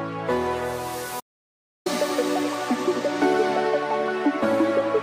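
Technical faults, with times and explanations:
1.20 to 1.86 s, audio dropout to silence: the input feeding the recorder was likely cut off for a moment, by a disconnected device, a broken link or a stray mute, while the recording carried on storing silence. The sound stops abruptly in mid-flow and resumes just as suddenly about 0.66 s later. The gap holds silence with no room tone or background noise, and whatever sounded during that stretch is lost.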